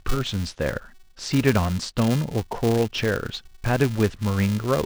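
From the very start and all the way through, there's a filter restarted on every block: it drops its memory at each block boundary and begins again from silence, so every block opens with a tiny transient. Those ticks land 375 times a second, which fits a 128-sample block, and they merge into a buzz riding on the speech, louder where the speech is louder and fading back when it quiets.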